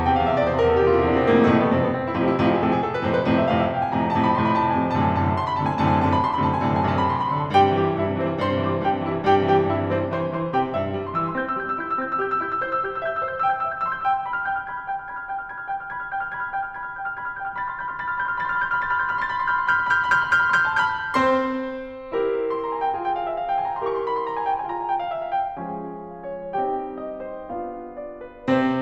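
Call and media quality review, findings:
Imaging from linear upsampling, throughout the music. Faint metallic shimmer on bright, high content; top of band dulled. Resampler stage, 24 kHz to 44.1 kHz, linear interpolation. Weak filtering leaves a mirrored image across 12 to 24 kHz, around 50 dB down.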